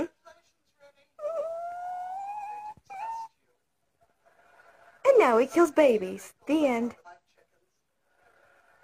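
The audio carries two short bursts of damaged data in a compressed stream, at 2.23 to 2.27 s and at 7.02 to 7.07 s, each lasting only a few tens of milliseconds. At both points the decoder hits corrupted bytes, misreads the frames and must resynchronise on a later frame header, producing a brief chirp or blip. On a spectrogram each appears as a narrow vertical band of broadband energy cutting across the surrounding content; the waveform shows an abrupt, jagged discontinuity.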